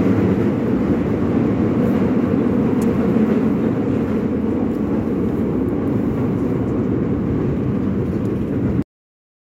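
At 8.82 s the sound stops abruptly mid-event and drops straight to digital silence, with no natural decay, through to the end. This is a cut-off end: the final buffers were never written or played out, so the last 0.73 s holds nothing.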